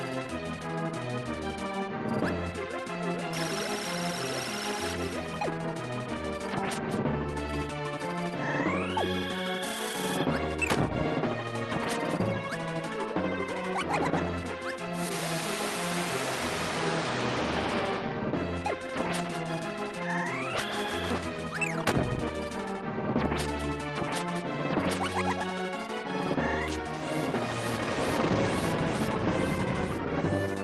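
Nothing goes wrong anywhere in the audio, and the call link it travelled over is doing its ordinary job, with the top end easing off around 12 kHz, as you'd expect from that kind of connection.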